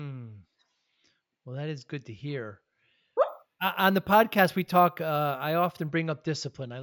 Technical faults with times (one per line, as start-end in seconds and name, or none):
3.29-5.88 imaging from sample-and-hold upsampling